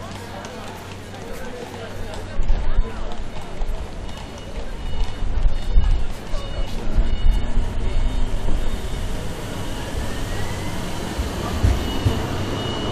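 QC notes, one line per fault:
Nothing to flag here; no technical faults turned up anywhere in this recording of sounds.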